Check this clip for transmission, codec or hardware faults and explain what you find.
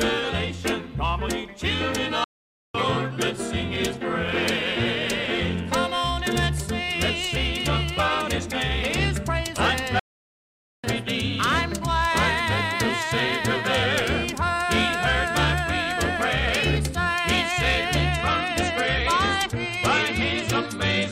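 Two kinds of fault are present: two playback stalls and a late switch to a lower-bitrate adaptive stream.

At 2.24 s the sound breaks off mid-flow and stays silent for about 0.50 s, resuming at 2.75 s. A longer gap follows at 9.99 s, lasting about 0.84 s until 10.84 s. Both are playback stalls, likely from the player running short of buffered data or having its output thread blocked, so nothing reached the output until it recovered. On a waveform each shows as a flat line cutting straight into the signal; on a spectrogram, a full-height blank column.

From 18.10 s to the end the quality drops abruptly with no gap, and coding artefacts become audible. This is an adaptive stream falling back to a lower-bitrate version after the connection slowed, and the degradation points to a step from roughly 128 kbit/s MP3 down to about 45 kbit/s. A spectrogram shows blotchy, smeared energy from that moment on. 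The waveform's amplitude barely changes.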